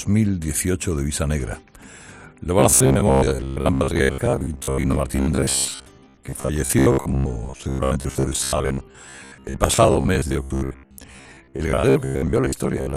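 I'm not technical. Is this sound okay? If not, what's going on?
No. From 2.59 s to the end at 12.96 s, new audio likely arrived too slowly, so the system kept replaying a tiny 15 ms scrap, skipping about half the real sound. This is robotic sound from repeated short buffers: a flat, metallic buzz around 67 Hz.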